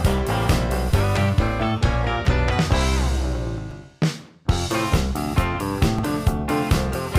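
Repeated buffer dropouts occur at 0.91, 2.25, 3.71 and 5.99 s. Each time, a 5.8 ms segment, consistent with a 256-sample buffer, replays once or twice, giving brief clicks.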